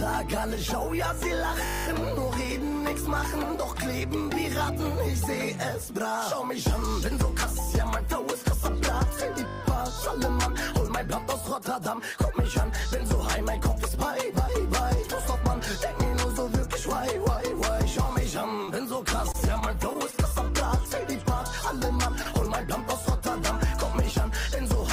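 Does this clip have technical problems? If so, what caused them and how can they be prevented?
Yes. There are three kinds of fault.

System hang loop at 1.66 to 1.86 s and again at 9.48 to 9.6 s. A 20 ms slice of audio repeats exactly, ten times in the first event and six in the second. This produces a steady 50 Hz buzz. The host or audio driver stalled while the hardware kept replaying its ring buffer, and the loop length fits a small buffer of about 20 ms. To prevent it, find and fix the driver or scheduling stall, and keep audio threads at real-time priority.

Short concealed packet loss at 18.65 s and 22.23 s. Each event is a hole of about 20 ms, patched by roughly 20 ms of synthesized continuation, and is heard as a brief smear or wobble before the real signal blends back in. The receiver's concealment extended the last sound across a packet that arrived too late or never arrived. 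To prevent it, improve network stability and allow a slightly deeper jitter buffer.

Repeated packet loss (robotic sound) from 19.2 to 20.15 s. Several holes, the longest about 21 ms and about 40 ms missing in total, are filled one after another in quick succession. Concealment covers about 8% of that stretch and gives a choppy texture. The gaps are consistent with packets being lost or arriving late again and again over this stretch. To prevent it, prioritize the media traffic with QoS and use forward error correction or redundancy to cover burst losses.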